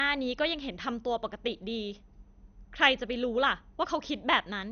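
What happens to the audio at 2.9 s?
At 2.9 s the speech sounds dull and gurgling, with granular distortion, as it does throughout the clip. This is likely MP2 compression: with too few bits, fitting roughly 48 kbps, upper sub-bands switch off. A spectrogram shows nothing above 6.5 kHz and flickering band patches.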